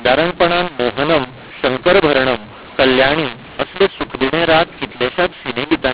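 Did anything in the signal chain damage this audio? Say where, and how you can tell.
Yes. The damage is at the codec stage, a mu-law and A-law mix-up: the speech was coded as A-law but decoded as mu-law, and it sounds wrong for the whole clip. The speech comes through harsh and gritty, with levels scrambled, and the pauses fill with a steady hiss because the quietest codes are lifted well above silence. That noisy silence sets it apart from clipping, and from ordinary G.711 quantisation noise, which stays faint and tracks the signal. The 4 kHz band limit of the telephone path is audible too.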